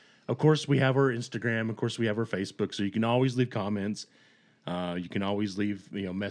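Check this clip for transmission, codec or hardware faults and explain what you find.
No faults detected in transmission.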